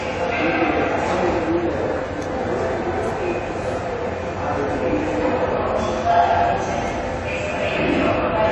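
The recording of everyday sound is band-limited throughout. Nothing is present above 11.4 kHz, so the top end sounds dull and closed in. Coding damage is plainly audible across the whole clip. This points to AAC compression, likely AAC-LC at a low bitrate. The sound fits roughly 32 kbps. At that rate the encoder lowers its cut-off to save bits. It also quantises the remaining frequency lines coarsely, and that leaves the audible damage.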